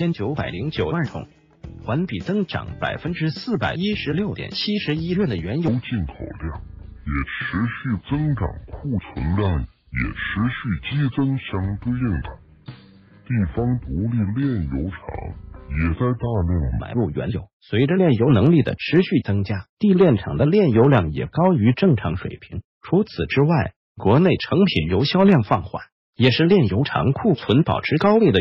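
From 5.68 to 16.80 s there's a section at the wrong speed: it runs at 0.658x, dropping about seven semitones, deep and sluggish, likely from a mismatched playback clock.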